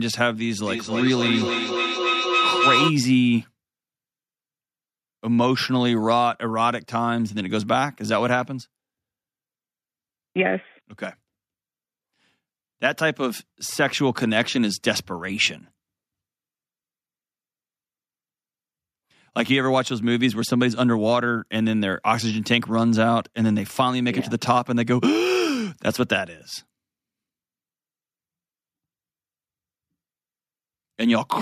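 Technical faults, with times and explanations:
0.59 to 2.96 s, feedback howl. A tone near 1.5 kHz builds and reaches about 1 dB above the speech. The loop repeats roughly every 300 ms. Sound from a loudspeaker reaches a microphone on the same call and returns louder each trip, narrowing to a favoured frequency.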